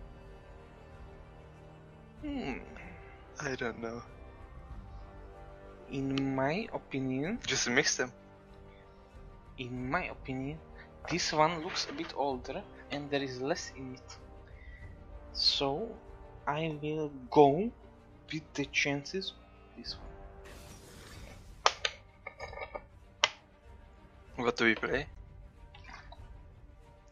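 No technical faults are audible.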